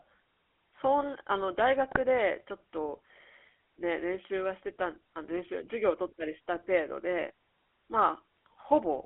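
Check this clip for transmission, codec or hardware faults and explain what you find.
Two things turn up: a GSM full-rate codec over the whole clip, and two short bursts of GSM bit errors on top of it.

The GSM full-rate codec colours everything. The speech sits in a phone band of roughly 300 Hz to 3.4 kHz, and there's a buzzy, gravelly grain from the coarse pulse excitation driving a vocal-tract model, which fits a 13 kbps full-rate stream. The damage is plainly audible.

GSM bit errors hit at 1.91 to 1.98 s and again at 8.34 to 8.40 s. Corrupted filter, pitch or gain values make the decoder rebuild garbage, so each burst comes out as a brief squawky, gargling pop. The length points to a few damaged frames each time.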